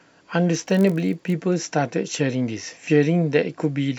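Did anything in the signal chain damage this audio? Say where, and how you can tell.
Yes. Between 0.53 and 1.34 s a block size mismatch (padded) at the buffer stage adds a steady buzz at about 46.9 Hz, which fits a 1024-sample read block topped up with zeros. Unlike mains hum, it is gated and periodic, with unchanged pitch and barely slowed speech.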